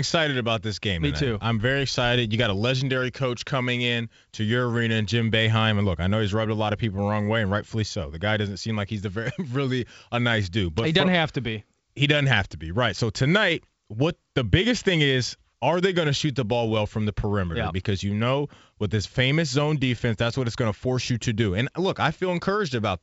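Nothing is technically wrong with this speech clip, which comes through G.722 wideband telephone coding at 64 kbit/s.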